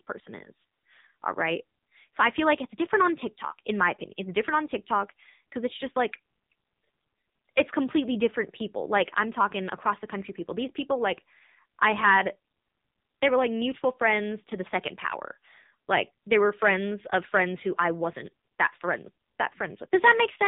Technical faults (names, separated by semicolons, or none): AMR narrowband mobile codec